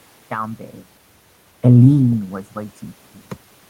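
Nothing stood out as a system fault on listening; the background room noise and the shifts in level around half a second and again near two seconds, as the talker moves relative to the microphone, belong to the recording itself.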